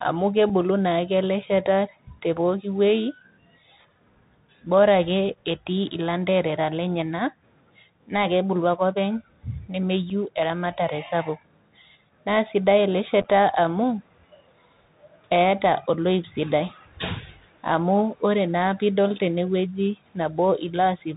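The Bluetooth CVSD headset codec is present throughout the speech. The signal is coded one bit per sample at 64 kHz, giving 64 kbps, with an adapting step size. Its damage is plainly audible. Nothing reaches above 4 kHz, s sounds turn scratchy, loud bright passages distort, and a granular hiss sits underneath.

Unconcealed Bluetooth headset packet loss occurs at 0.50 s, just before "naake ele shata te", and at 10.10 s, just before "eramatare sapuk". Each time about 3.8 ms of audio drops out, which fits a single lost headset packet being replaced by silence. The result is a brief hole with hard edges. At 13.22 to 13.25 s, a cluster of losses totals about 22.5 ms scattered over 30 ms, with the longest gap 7.5 ms. This points to several scattered packets dropping out, and it sounds like a short burst of crackle and chopping.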